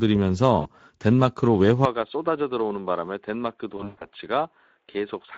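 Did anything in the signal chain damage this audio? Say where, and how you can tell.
Yes. At the codec stage, Speex compression runs through the whole clip with plainly audible damage: a hoarse, noisy texture from a starved excitation signal. On a spectrogram, harmonics look smeared and grainy rather than cleanly striated, which points to a mid-rate mode around 17 kbps.

At the network stage, there is VoIP packet loss concealed by the speech codec. About 40 ms is lost between 0.61 and 0.68 s. Then 160 ms is lost in pieces between 3.77 and 4.07 s, with the longest gap 120 ms. The decoder stretches its last pitch and filter into a buzzy tone or coloured noise that fades.

At the input, from 1.85 s to the end, the sound abruptly turns duller and boxy, with nothing above 3.7 kHz. It is a few dB quieter, and a new, faint noise floor sits far below the signal. There is no silence at the change. 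This was likely an input switched to a poorer device. The spectrogram shows a hard ceiling starting at that moment.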